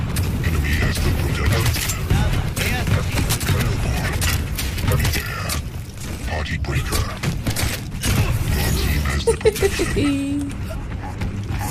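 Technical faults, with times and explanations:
3.26 to 3.42 s, cable scratch noise: A dense, uneven burst of scratching rustle lies over the sound for about 0.15 s. It is loud, only about 5 dB below the signal. A worn cable or connector being moved, with its contact resistance jumping rapidly, is the likely cause.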